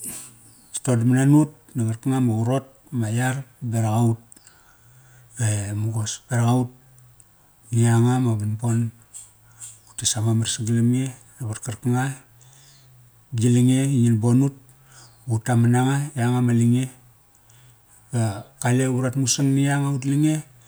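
No technical faults are audible anywhere in the speech recording.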